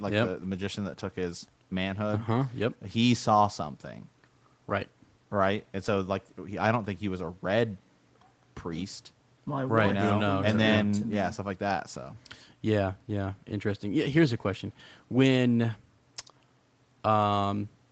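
From 2.29 to 2.35 s, a lost packet was rebuilt from error correction: low-bitrate backup copies fill roughly 40 ms, so the speech turns briefly rougher and noisier without any gap.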